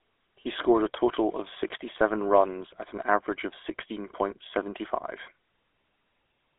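Speech coded with GSM full-rate throughout: nothing above 3.7 kHz, and a buzzy, gravelly roughness from pulse-train excitation that band-limiting alone wouldn't cause.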